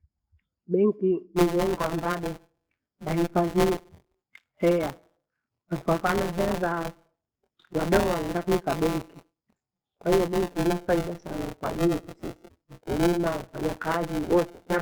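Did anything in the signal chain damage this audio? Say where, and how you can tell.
Yes. This is buffer tearing at the driver or buffer stage, running from 1.36 s to the end at 14.82 s. The speech carries a steady robotic buzz at 172 Hz, which fits a 256-sample buffer, and it drops away whenever the signal does. The app's write pointer and the hardware's read pointer have drifted so they cross mid-period, so roughly a fifth of each block replays audio from around 20 ms earlier, with hard splices on both edges.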